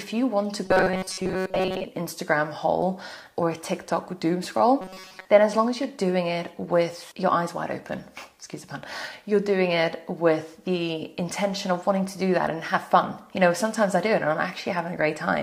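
A rigid, metallic buzz at 188 Hz is heard from 0.65 to 1.84 s and from 4.81 to 5.26 s. This is robotic sound from repeated short buffers, likely a roughly 5 ms slice looped while most of the real audio is skipped.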